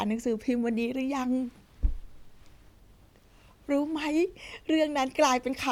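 Nothing in the speech stood out as a technical problem on listening.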